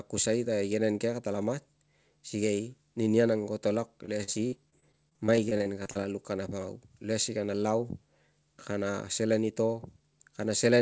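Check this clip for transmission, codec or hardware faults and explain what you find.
One transmission fault is present: repeated packet loss (robotic sound) between 4.06 and 5.97 s. Over that stretch the audio path lost or received late a rapid series of packets, with individual gaps up to 50 ms long and about 400 ms missing in total. The receiver patched each hole by extending the last received sound, covering roughly 350 ms and about 18% of the span. The speech there turns choppy, with pieces missing. The whole clip, including this stretch, carries nothing above 8 kHz, which fits a wideband call codec such as G.722.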